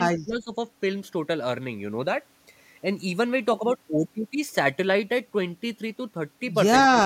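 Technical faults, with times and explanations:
0.24 to 0.53 s and 6.91 to 6.95 s, speech suppressed in double talk: the speech level falls suddenly, by roughly 15 dB at its deepest, for about a third of a second early in the clip and again for a brief moment near the end. This is likely an echo canceller meeting simultaneous talk from the far end. Unable to separate the local talker from loudspeaker echo, it pulls the whole signal down, which is heard as a dip in the speech.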